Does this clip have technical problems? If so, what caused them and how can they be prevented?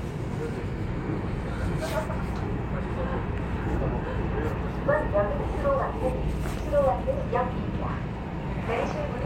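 No, nothing technical stands out here; the sound comes through steady and whole, so there's nothing to fix or prevent.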